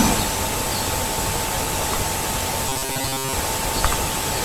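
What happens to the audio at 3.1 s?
Robotic sound from repeated short buffers runs from 2.69 to 3.33 s, covering 3.1 s. The speech turns into a rigid, metallic buzz at 134 Hz that still loosely follows the words, likely from repeating about 7.5 ms chunks while most incoming audio is skipped.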